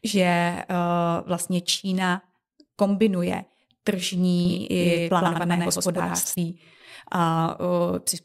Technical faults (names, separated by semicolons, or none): doubled audio track